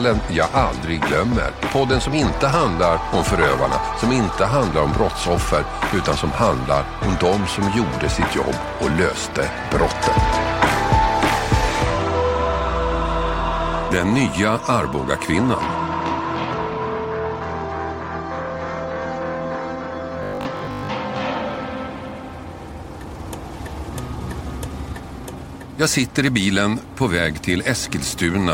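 From 20.23 to 20.89 s the audio turns into a rigid, metallic buzz at 50 Hz, the robotic sound from repeated short buffers. It is likely caused by audio arriving too seldom, so a 20 ms stretch is looped over most of that span while the real signal is skipped.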